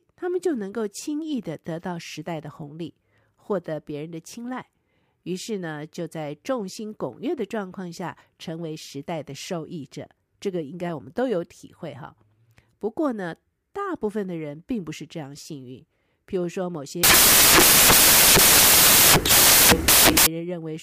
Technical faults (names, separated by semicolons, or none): samples built from the wrong bytes